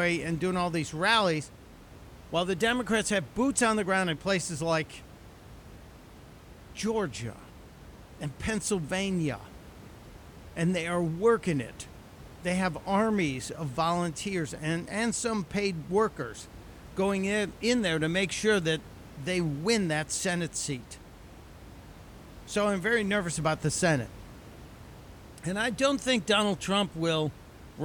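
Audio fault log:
No faults heard anywhere in this speech recording.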